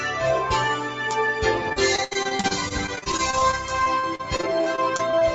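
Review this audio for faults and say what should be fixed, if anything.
A speech-tuned noise suppressor was left on for this non-speech audio. It treats sustained content as noise, so level swings by about 5 dB and tails pump.

From 0.76 to 1.0 s, the noise suppressor cut this sound as noise, dropping it by up to about 7 dB and thinning its decay.

From 1.69 to 5.23 s, repeated packet loss left dozens of short holes, the longest 70 ms. Patching covered about a fifth of the span, making it choppy and robotic.

To prevent this, disable speech noise suppression for music or general sound, and improve the network path or jitter buffering so packets arrive intact.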